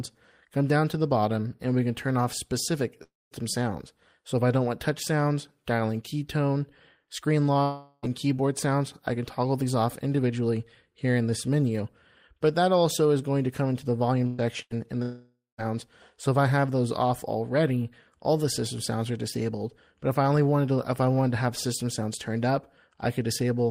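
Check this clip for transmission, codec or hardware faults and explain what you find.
The clip has transmission faults: three long network dropouts and two bursts of packet loss, all from audio failing to arrive in time.

Long network dropout, at 3.03 to 3.34 s, 7.63 to 8.06 s and 15.02 to 15.61 s. The likely cause is a stretch where no packets reached the receiver, losing about 280 ms, 400 ms and 560 ms of audio. The receiver extends the last sound as a fading buzz or hiss. At 3.03 s the fill gives way to about 210 ms of silence, and at 15.02 s to about 180 ms. At 7.63 s it carries through the whole gap. The sound then resumes further on, with that portion gone.

Burst of packet loss, at 14.27 to 14.41 s and 14.62 to 14.73 s. A short run of packets went missing or arrived too late, about 120 ms and then 80 ms. Concealment holds the preceding sound and lowers it across each gap, so you hear a brief smeared buzz or hiss. 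The audio then jumps ahead with that fragment missing. The two bursts fall close together, just before the third dropout.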